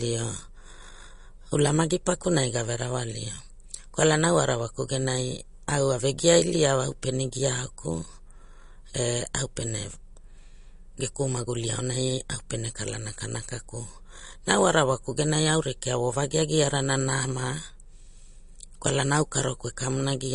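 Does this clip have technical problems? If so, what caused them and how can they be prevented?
Yes. Throughout the speech the sound has a watery, swirling quality, with metallic chirping on s sounds, and nothing is present above 10.6 kHz. This is most likely MP3 compression at a bitrate that fits roughly 40 kbps: starved of bits, the encoder cut the treble at a fixed point and dropped weaker frequency lines, which then flicker in and out from frame to frame. Encoding at a higher bitrate, or keeping the audio in a lossless format, would prevent this.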